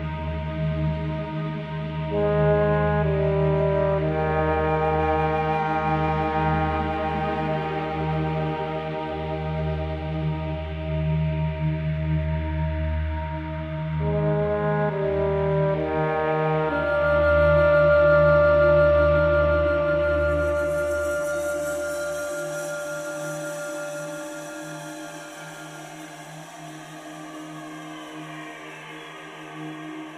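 No technical faults are audible anywhere in the clip.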